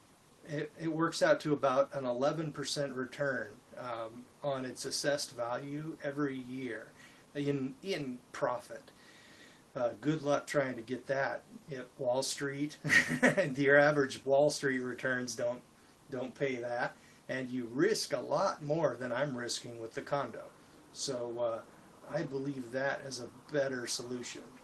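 Nothing in this clip stands out as a technical fault.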